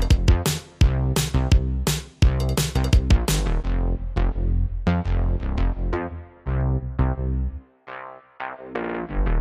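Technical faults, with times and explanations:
8.83 to 8.99 s, repeated frames: A short block of about 52 ms plays three extra times in a row, so this moment stutters. The block length fits a run of two compressed frames. The data for those frames was written or sent more than once, and the decoder faithfully played each copy. Each repeat is heard as the same fragment looping. The copies add about 157 ms, so everything after this point arrives slightly late.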